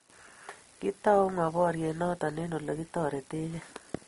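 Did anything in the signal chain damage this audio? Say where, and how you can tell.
Yes, at the codec stage: the speech was likely transcoded between lossy codecs, an Opus encode near 24 kbit/s followed by MP3 near 47 kbit/s. Throughout, nothing sounds above 11.2 kHz, and the MP3 pass spends bits re-encoding Opus artefacts, so both artefact types are heard together.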